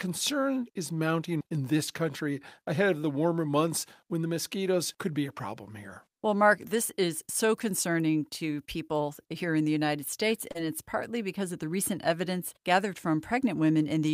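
At 10.51 to 10.57 s, just before "it's partly because of", there is a short concealed packet loss. About 40 ms of speech arrived too late to decode. The receiver patched 32 ms by extending the preceding sound, then blended back, leaving a brief smear.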